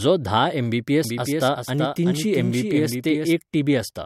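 From 1.04 to 3.32 s a doubled audio track appears: a flat copy about 400 ms behind, roughly 5 dB down, likely from a second capture path, cutting in and out abruptly.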